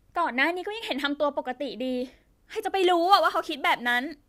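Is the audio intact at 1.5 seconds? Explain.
Yes, the speech at 1.5 s plays through intact, with no audible fault at that moment.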